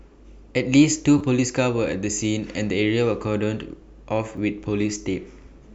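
At 1.18 to 1.21 s the speech catches on a repeated buffer: a piece about 10.7 ms long, which fits a 512-sample buffer, plays twice more because fresh audio arrived late. It comes out as a brief buzz, and roughly 20 ms of speech never plays. At 4.36 s the same fault recurs with one extra play, giving a single click and about 10 ms lost. Unlike a dropout, there is no gap of silence, only identical material repeated across hard joins.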